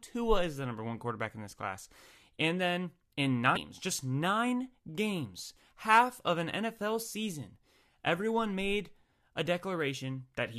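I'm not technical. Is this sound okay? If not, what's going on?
No. There is one short glitch in this speech clip, at about 3.55 seconds. It comes right after "then in" and just before "just nine games half". It is a tiny blip or chirp. The cause is damaged data in a compressed stream. A small piece of the stored audio got corrupted. The player could not read that bit properly. It briefly lost its place, then found the next good chunk and carried on.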